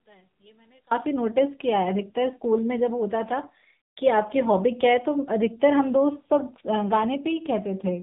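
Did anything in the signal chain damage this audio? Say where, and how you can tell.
Yes, two stages left marks. Throughout the clip the speech carries the sound of the AMR narrowband mobile codec. Nothing passes above 3.8 kHz, and the voice has a buzzy, synthetic edge from a vocal-tract model rebuilt from a few pulses per subframe. That degree of damage fits the 7.4 kbps mode. A plain low-pass filter would dull the top but leave the voice natural. This coded, artificial texture points to the codec stage.

From the start to 0.91 s the speech drops by about 31 dB and turns faint. That is what remains when the two stereo channels nearly cancel in a mono sum, and one channel inverted is the likely cause, most plausibly a polarity swap in wiring or routing. A dropout would leave silence. Here a faint copy survives, which is the residual difference between the channels. Full level returns after 0.91 s.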